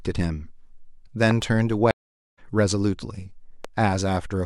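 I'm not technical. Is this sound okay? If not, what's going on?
No. There are two kinds of problem.

From 1.31 to 1.44 s there is a loud pop, actually two sharp pops close together, and a single one at about 3.65 s. Both stand clearly above the speech, which carries on underneath. These are likely caused by a sudden electrical jolt, such as a plug being moved, a switch, static or a driver glitch, which adds a brief spike that the equipment turns into a click or thump.

At 1.91 s there is a stream reconnect. The connection dropped, and the audio went silent for just under half a second. When it resumed at 2.39 s, the player had restarted partway through, so the speech picks up roughly 0.4 s later than where it left off. That stretch of speech is simply missing rather than delayed.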